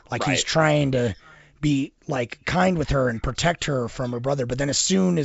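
No technical faults can be heard in this speech; it is carried by G.722 wideband telephone coding at 64 kbit/s, with nothing above about 7.7 kHz.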